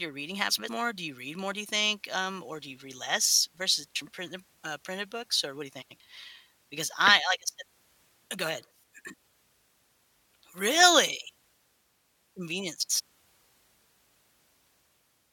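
Frames out of order: two neighbouring runs of about 93 ms were decoded swapped at 0.50–0.69 s after "your reading", 5.82–6.01 s after "what do you", 12.80–13.00 s and 14.35–14.52 s. Each stretch plays with its halves exchanged, a garbled flutter, with no time lost.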